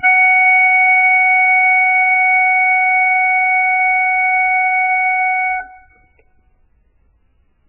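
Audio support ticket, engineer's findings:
MP3 compression, throughout the music. Treble gone above about 2.9 kHz; watery, swirly texture, smeared attacks. Likely cause: encoder starved of bits, cutting the top band and dropping weak frequency lines frame to frame. Heavy damage fits a very low bitrate, around 8 kbps.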